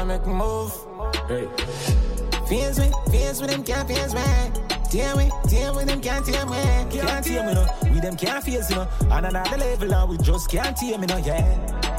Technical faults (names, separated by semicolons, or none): none